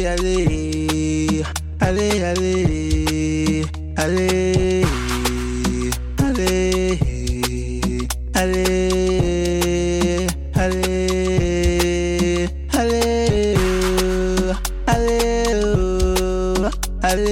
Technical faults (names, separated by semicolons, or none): channel delay (comb filtering)